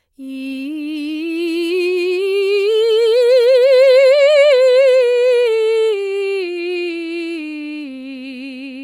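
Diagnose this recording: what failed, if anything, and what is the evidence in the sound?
Nothing failed; the music shows no audible fault anywhere.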